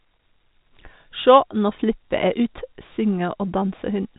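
No technical faults can be heard in this speech, which comes through G.711 telephone coding with nothing above 3.8 kHz.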